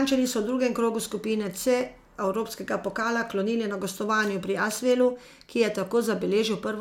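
No technical faults can be heard anywhere in the recording; the signal holds steady throughout with nothing breaking into it.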